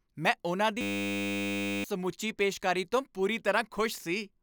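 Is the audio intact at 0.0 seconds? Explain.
Yes, at 0.0 seconds the speech is intact, with no audible dropout, click, distortion or other fault at that moment.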